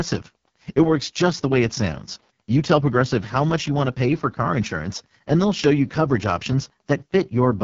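Throughout, the speech sounds rough and raspy with nothing above about 7.4 kHz, the heavy AMR wideband (HD Voice) codec damage expected from its lowest 6.6 kbit/s mode.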